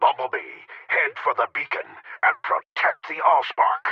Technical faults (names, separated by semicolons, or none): none